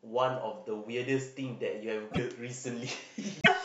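At 2.10 to 2.19 s and again at 3.41 to 3.48 s the speech jumps forward, with a brief chirp, burst of noise or short hole right after each cut. That's likely a broken MP3 bit reservoir: frames went missing, so the next few 26 ms frames decoded from the wrong bytes.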